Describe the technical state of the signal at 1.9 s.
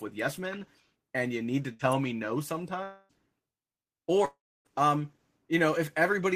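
A burst of packet loss from 1.73 to 1.81 s, after "and you need to", made the receiver extend and fade the last sound for about 58 ms, leaving a held, dying tail, and then skip roughly 60 ms of audio. At 1.92 s, before "me no", an electrical switching spike, likely arcing from a nearby switch or motor, puts a sharp snap or a tight cluster of clicks on top of the speech.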